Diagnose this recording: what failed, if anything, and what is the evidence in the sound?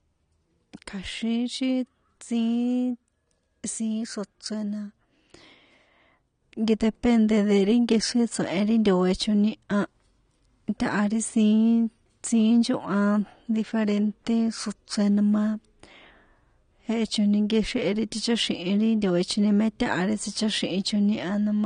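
The codec stage is the likely culprit: heavy AAC compression, consistent with AAC-LC near 32 kbps, runs through the whole speech clip. Nothing survives above 9.7 kHz, leaving the speech dull, and coarse spectral quantisation adds a plainly audible smeared, warbling texture.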